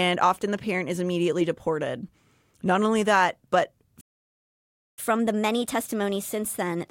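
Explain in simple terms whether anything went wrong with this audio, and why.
At 4.00 s the speech suddenly cuts out and stays silent for almost a second, until 4.99 s. This is a playback stall: the player most likely ran out of audio data or was held up, so nothing came out until it recovered.

From 4.99 s to the end of the clip the speech runs 1.15 times too fast and sounds about two semitones higher. This is catch-up at higher speed: the player rushes through its backlog to win back the time lost during the stall.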